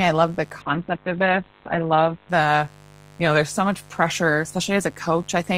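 A raspy mains buzz runs throughout, around 25 dB below the speech. Sharp 50 Hz switching spikes add harmonics into the kilohertz range, which makes it raspier than a smooth hum. From 0.62 to 2.35 s, a call bitrate drop makes the speech rough and watery, and the top end cuts off near 4 kHz instead of 20 kHz. This fits an encoder forced from roughly 32 kbps down to 7 kbps. Unlike the steady buzz, it clears again before the clip ends.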